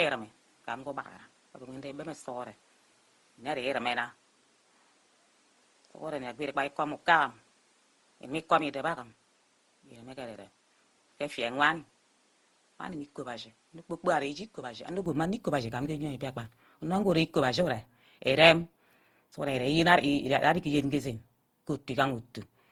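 From the start until 15.06 s, the speech comes through what sounds like an input switched to a poorer device, likely a lesser microphone or a headset call profile. Nothing reaches above 11.4 kHz, the tone is duller and boxier, the level sits about 5 dB lower, and background noise lies about 35 dB under the signal. At 15.06 s the sound clears abruptly with no gap, which separates this from a codec's fixed band limit.

Across the whole clip there is generation loss, likely from around ten passes of lossy coding, which fits Opus at 64 kbit/s re-encoded repeatedly. The sound swirls and turns hollow, consonant attacks smear, and the watery texture persists after the input improves at 15.06 s. A single encode at that bitrate would sound far cleaner, so the damage has built up over successive passes rather than coming from the bitrate alone.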